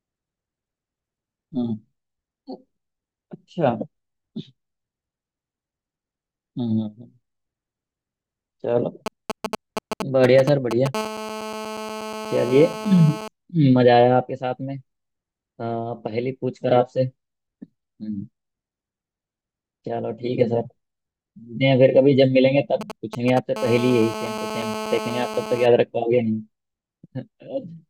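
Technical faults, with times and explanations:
9.06–10.95 s, GSM signalling bursts: a nearby 2G phone is exchanging short groups of radio bursts with the network, and the audio circuit rectifies them. This is heard as a galloping dit-dit-dit of brief 217 Hz buzzes, nearly as loud as the speech.
10.95–13.28 s, GSM phone buzz: a nearby 2G phone is in a call and transmits continuously at 217 bursts per second. The rectified pulses make a steady, raspy 217 Hz buzz, rich in harmonics, about 11 dB below the speech.
22.81–23.39 s, GSM signalling bursts: a second short signalling exchange is rectified the same way. It is heard as a brief galloping cluster of 217 Hz buzzes, clearly below the speech.
23.56–25.66 s, GSM phone buzz: call-mode transmission resumes, producing the same hard, harmonic-laden 217 Hz buzz, about 10 dB below the speech and unrelated to it.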